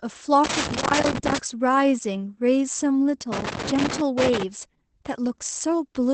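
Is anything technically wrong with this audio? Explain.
Yes, there are two problems. Throughout the clip there is Opus voice compression. The speech sounds muffled and slightly hoarse and robotic. A spectrogram shows a hard ceiling with nothing above 8.6 kHz, which fits Opus's wideband speech mode at a low rate around 12 kbps. There, a linear-prediction coder models the voice and codes its excitation coarsely.

From 0.44 to 1.38 s and again from 3.32 to 4.43 s there is loose connector crackle. A contact that keeps making and breaking contact chops the signal into an irregular scratchy burst. The waveform shows ragged dropouts and sharp spikes, and the spectrogram shows scattered broadband vertical streaks.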